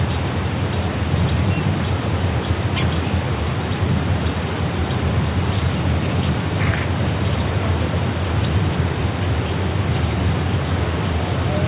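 No faults are present; the audio carries nothing above 4 kHz, which fits a narrowband call path such as G.711 mu-law at 64 kbps.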